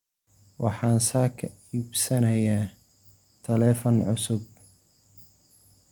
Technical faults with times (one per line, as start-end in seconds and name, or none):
none